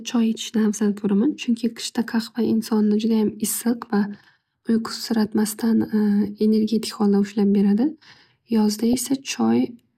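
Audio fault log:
3.49 to 3.64 s and 8.81 to 8.94 s, DAB burbling: two short bursts of short noise blips in single sub-bands over the speech. Weak reception let bit errors slip past error correction into the MP2 samples and scale factors.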